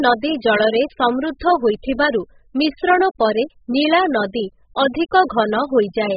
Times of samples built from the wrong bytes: none

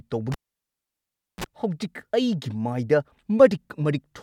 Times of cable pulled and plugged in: 0.32-1.44

